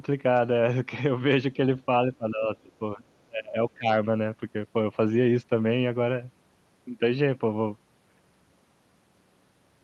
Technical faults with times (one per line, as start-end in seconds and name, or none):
2.07-3.02 speech suppressed in double talk
3.29-3.88 speech suppressed in double talk